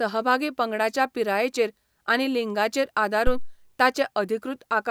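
A phantom power thump hits at 3.27 s and dies away by 3.60 s. Switching the supply on a live input pushes a voltage step through the coupling capacitors. The result is a deep thump peaking around -11 dBFS that decays over about 74 ms.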